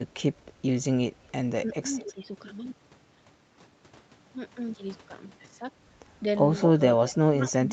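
From 1.64 to 2.23 s the speech dips in patches totalling about 300 ms, falling by roughly 10 dB at worst. This is speech suppressed in double talk, likely the echo canceller attenuating the near talker while the far side was also speaking.

Inside that span, from 1.99 to 2.07 s, a faint echo leak appears: a copy of the speech delayed by 221 ms, around 25 dB below the direct sound. The likely cause is loudspeaker pickup that the canceller failed to remove and sent back down the line.

At 6.6 to 6.66 s the same 221 ms echo returns much more clearly, only about 10 dB under the speech, as a short delayed scrap.

From 6.73 s to the end the speech is suppressed in double talk again, pulled down by roughly 15 dB at its deepest.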